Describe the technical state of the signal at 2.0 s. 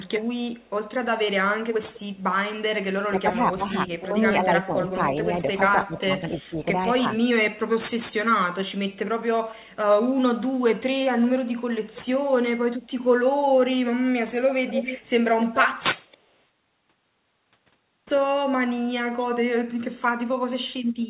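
At 2.0 s you're right inside a short stretch of echo leak, running from about 1.93 to 2.23 s. A faint, delayed copy of the speech trails the original by about 257 ms, sitting roughly 25 dB below it, so it's a quiet ghost rather than a clear repeat. The likely cause is a far end on a loudspeaker whose echo canceller let some of its own pickup through and sent it back down the line, all within the call's 4 kHz band.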